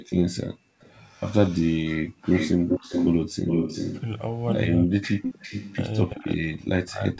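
From 0.0 to 0.8 s the echo canceller clamps down on the microphone while the loudspeaker plays, so the background is gated. The room sound plunges by about 38 dB in short dips, adding up to roughly a third of a second, then comes back.

From 0.09 to 4.01 s there is an echo leak, likely because the far side's canceller failed to remove what its microphone picked up from its loudspeaker. A copy of the speech returns 389 ms late, about as loud as the original, giving a doubled sound.

From 2.09 to 2.23 s the canceller gates the background again. The room tone drops by about 39 dB for roughly 150 ms, leaving a brief hole in the ambience before it returns.

From 4.76 s to the end both sides talk at once. The canceller likely cannot separate the local talker from the loudspeaker echo and turns both down, so speech is suppressed in double talk. The voice sinks by some 35 dB.

From 5.03 s onward the echo leak returns within that overlap. 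The same 389 ms delay holds, but the leaked copy now sits around 10 dB below the speech, a fainter trailing repeat beneath the suppressed voice.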